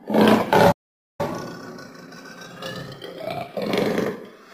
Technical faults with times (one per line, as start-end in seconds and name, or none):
0.71-1.21 playback stall
1.21-4.21 time-compressed catch-up